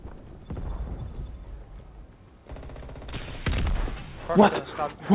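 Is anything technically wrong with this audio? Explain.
No, nothing stood out on listening: the sound comes through a narrowband G.711 call path with nothing above 4 kHz, which is how that path normally sounds.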